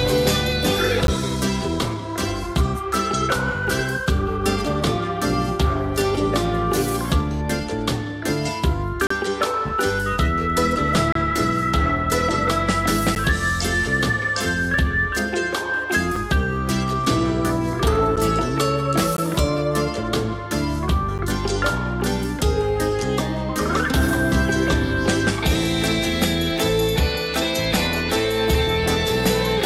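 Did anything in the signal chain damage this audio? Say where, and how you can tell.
Yes, at playback, a gap between stream segments. Hard-edged silences of about 5 to 35 ms fall at 1.07, 9.07 to 9.11, 11.12 to 11.15, 13.15, 16.16, 18.16, 19.17 and 21.18 s, on 1 s segment boundaries where mismatched timestamps are padded with silence. Unlike a dropout, the sound resumes exactly where it stopped.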